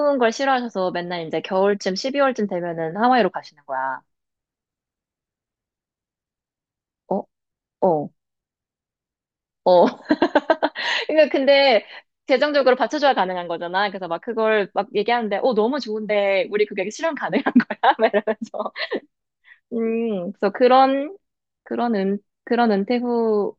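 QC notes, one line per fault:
No faults found.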